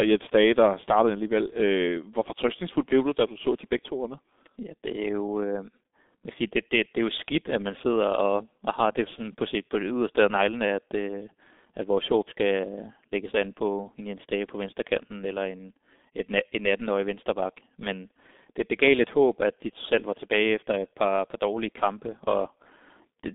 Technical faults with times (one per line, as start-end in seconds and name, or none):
0.00-23.35 G.723.1 codec